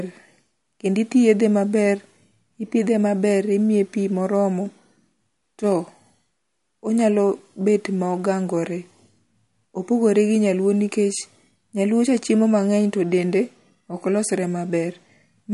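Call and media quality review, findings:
MP3 compression, throughout: plainly audible watery, swirly texture on the speech, dull top end. Likely cause: MP3 encoding at a low bitrate, consistent with roughly 48 kbps. Starved encoder drops weak frequency lines frame to frame and low-passes the treble. Spectrogram: hard ceiling at 11.2 kHz with nothing above, patchy, flickering holes in the upper bands. Waveform: no obvious signature.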